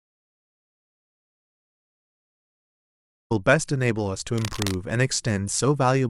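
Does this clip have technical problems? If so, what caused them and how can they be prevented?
Yes. The clip opens in an audio dropout to silence that's already under way and runs to 3.31 s: pure silence, no room tone, so the input was likely disconnected or muted while the recorder kept writing. Check connections and mute states before rolling.

Then from 4.38 to 4.75 s there's cable scratch noise, a burst of rough, uneven crackle roughly 10 dB under the speech, likely a worn cable or connector being moved and its contact flickering. Swap out suspect leads and keep cables still while recording.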